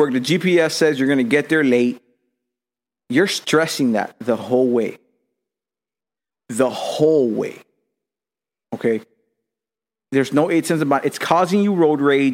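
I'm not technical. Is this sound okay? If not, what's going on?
Yes, this sound is okay, and there's nothing going on with it that needs fixing.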